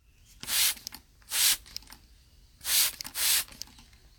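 Nothing technical seems to be going wrong in this short bit of everyday sound; there's no fault to point to anywhere in it.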